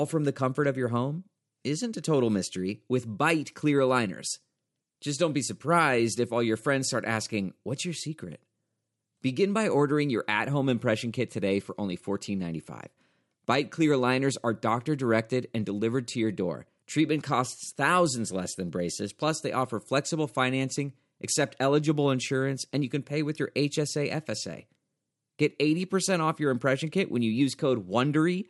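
No technical faults can be heard anywhere in the speech.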